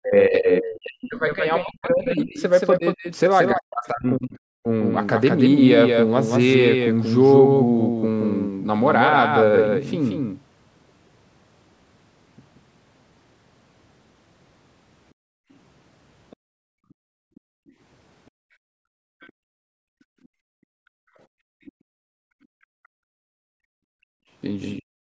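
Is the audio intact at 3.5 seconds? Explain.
No. At 3.5 seconds the speech falls within a stretch from 0 to 4.68 s where it dips very deeply, thins and cuts out in pieces, about three seconds in all. This is likely speech suppressed in double talk, where an echo canceller turned down the talker along with the far side. Unlike a network dropout, the losses come as uneven ducking rather than clean gaps. Throughout, including this moment, a second full-band copy trails by roughly a fifth of a second at a somewhat lower level, likely a doubled audio track. Unlike room echo, it has no decay or reverberant colour.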